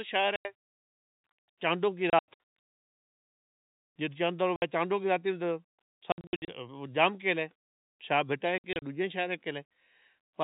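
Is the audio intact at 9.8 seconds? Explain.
Yes, the speech at 9.8 seconds is intact, with nothing interrupting or damaging it beyond the narrow telephone band of its G.711 coding.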